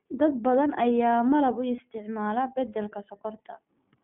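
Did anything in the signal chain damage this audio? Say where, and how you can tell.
Yes. At the codec stage, the iLBC codec limits the whole clip to roughly 150 Hz to 3.4 kHz, and the speech has a plainly audible rough, synthetic edge. Each frame's excitation is coded independently at low rate, which fits the 15.2 kbps mode.

At the network stage, lost iLBC frames occur right after "malab u", from 1.76 to 1.81 s. The gap is filled by a briefly held, slightly buzzy repeat of the last pitch cycle, which fits one dropped 20 ms frame. Clean speech returns immediately because the next frame decodes on its own.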